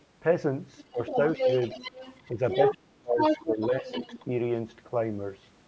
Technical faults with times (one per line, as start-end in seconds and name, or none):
0.78-2.74 other side's voice leaking through
0.91-1.18 speech suppressed in double talk
2.32-2.39 speech suppressed in double talk
2.74-4.30 speech suppressed in double talk
3.19-4.25 other side's voice leaking through